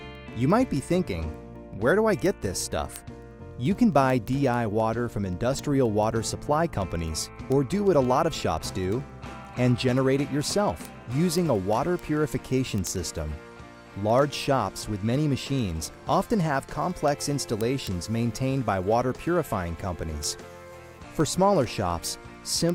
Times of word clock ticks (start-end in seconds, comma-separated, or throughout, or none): 0.15-22.69